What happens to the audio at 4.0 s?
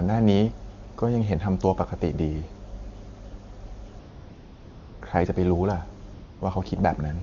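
AMR comfort noise: from 3.99 to 5.01 s the phone judged the talker silent, halted speech frames, and synthetic steady noise replaced the real background for about 1 s.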